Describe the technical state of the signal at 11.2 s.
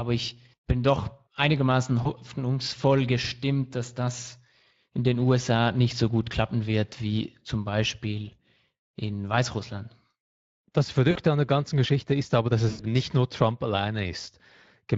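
Just before 11.2 s, from 11.11 to 11.18 s, VoIP packet loss concealed by the speech codec replaces about 40 ms of lost audio. The decoder extends the last pitch and filter, producing a fading buzzy tone or coloured noise right before "an der ganzen". On a spectrogram this looks like smeared, repeated harmonics; on the waveform, a shrinking, overly regular stretch. The Speex codec runs throughout with plainly audible coarseness, which fits a bitrate around 20 kbps. On a spectrogram this shows as blurred, grainy harmonic detail.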